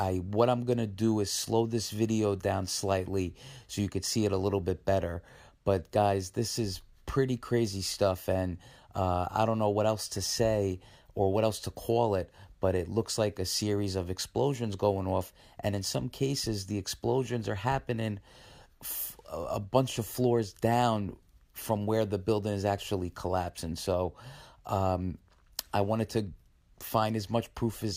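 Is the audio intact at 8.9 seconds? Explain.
Yes, the audio is intact at 8.9 seconds, with no fault audible at that moment.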